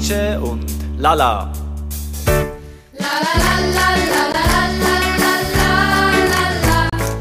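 At 4.32 s the sound cuts out for about 14.5 ms, and again from 6.89 to 6.93 s for 29 ms, resuming as if it had played on. These gaps are likely a Bluetooth dropout, with the lengths pointing to one and then two late packets being discarded.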